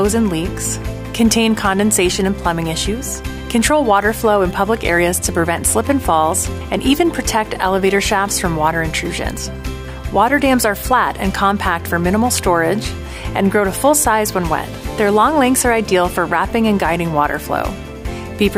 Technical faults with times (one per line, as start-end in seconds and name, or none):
none